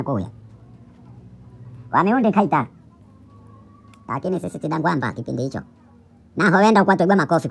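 From start to finish the speech plays back too fast and too high, the signature of a wrong sample rate. The samples are clocked out at a rate higher than they were captured at, with no resampling in between, so timing and pitch shift together. Everything runs 1.5 times faster and sits 7.02 semitones higher, which fits audio recorded at 16 kHz being played at 24 kHz. The voice sounds rushed and chipmunk-like.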